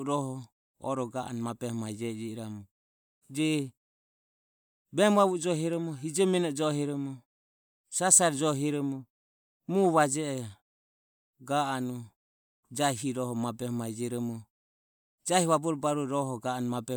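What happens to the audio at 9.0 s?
At 9.0 s the speech plays through intact, with no dropout, click or other fault at that moment.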